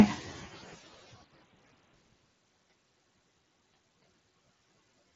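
The noise suppressor artifacts run through the whole clip: the suppressor keeps riding the background down between phrases, so the noise dips in the gaps and comes back up under the words. From 0.21 to 2.58 s there's speech cut by the noise suppressor. It mistook parts of the talking for noise and pulled them down by up to about 19 dB, so around two seconds' worth of quieter sounds come out swallowed and faint. The room noise sits about 19 dB under the speech, and the top end stops near 7.7 kHz, which fits the mSBC headset link.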